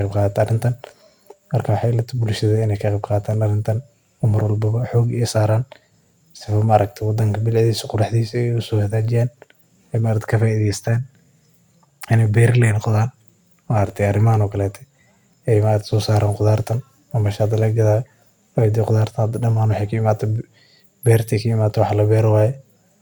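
Nothing in this speech recording stands out as a technical problem; it simply runs along without any glitches worth pointing to.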